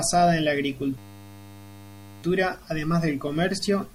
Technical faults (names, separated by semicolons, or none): system hang loop